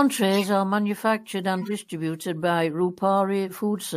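It's a short speech clip with two corrupt frame decoded faults: one from 0.31 to 0.49 s, just before "are manufactured", and a quieter one from 1.58 to 1.72 s, right after "are manufactured". Each time the decoder played a few damaged frames, misplacing energy in frequency.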